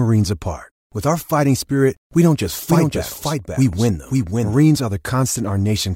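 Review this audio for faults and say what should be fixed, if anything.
From 2.68 to 4.58 s, right after "spirit we don't just", there's a doubled audio track: a second, dry copy about half a second behind, a few dB quieter, switching in and out abruptly. Likely a stray second capture path. Mute or remove that duplicate route.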